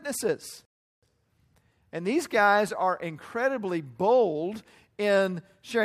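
At 0.65 s the speech drops into silence until 1.03 s, then picks up exactly where it left off. This is a rebuffering stall: playback exhausted its downloaded audio and waited for more data, inserting about 0.37 s of dead air without losing any content.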